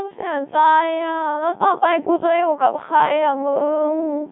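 Throughout, Codec 2 vocoder damage makes the speech robotic and buzzy, rebuilt from sine waves. A spectrogram shows rigid harmonic stripes and nothing above 3.8 kHz.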